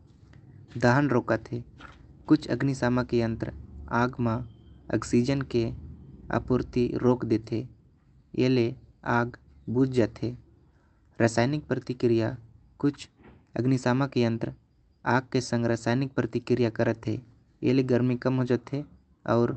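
Nothing's wrong with this speech clip; it came over a call link using Opus at 32 kbps with the top end stopping around 8 kHz, and that's just how the codec is set up here.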